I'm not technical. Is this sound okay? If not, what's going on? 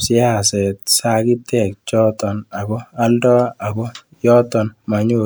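Yes, nothing stood out as a problem when listening to this speech recording.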